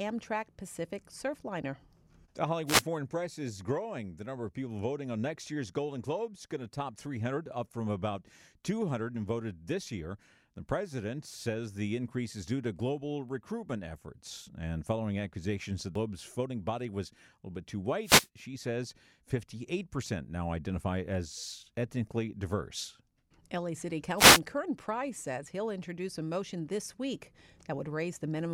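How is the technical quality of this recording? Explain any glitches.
The recording has two kinds of trouble: three wireless microphone noise hits and one spot of damaged data in the compressed stream.

The wireless microphone noise hits land at 2.66 to 2.83 s, 18.03 to 18.28 s and 24.17 to 24.40 s, each lasting roughly a sixth to a quarter of a second. They sound like a quick swish of static washing over the speech. That's the analogue FM radio link fading as reflected signals cancel the direct one, so the receiver's own noise rises up.

The damaged data shows up as a single short blip at about 15.95 s, a short glitch that's over almost instantly. Some of the compressed stream got corrupted there, so the decoder misread those frames, lost its place and hunted for the next valid frame header. That hiccup is what you're hearing as the glitch.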